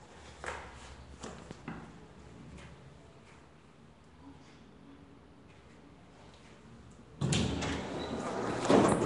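Throughout, the audio has a rough, hissy haze, smeared texture and nothing above 10.6 kHz, likely Nellymoser compression noise-filling the bands it starves of bits.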